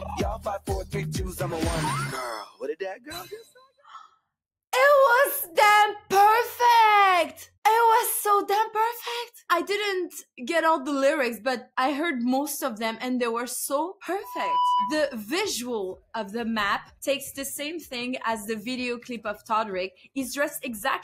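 The audio has two kinds of fault. The first is sound cut by the noise suppressor. The suppressor mistakes part of the wanted sound for noise and pulls it down. This happens at 2.46 to 2.62 s, by about 15 dB. It happens again at 2.95 to 4.18 s, by about 17 dB at the deepest, with roughly a second of that span audibly sunk. It happens a third time at 19.91 to 20.16 s, by about 9 dB. In each span the level dips. The second fault is a loudspeaker feedback squeal from 14.23 to 15.21 s. A microphone is picking up the speaker it feeds, and the loop gain passes one at 988 Hz. That single tone swells within about a third of a second. It reaches roughly the level of the main sound before it stops.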